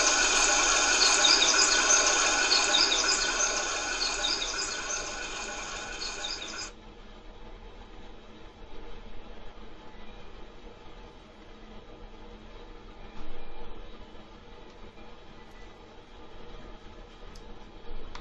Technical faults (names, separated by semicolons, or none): none